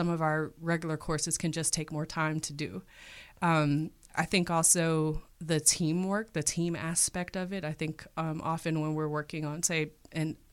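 No technical faults can be heard in this recording.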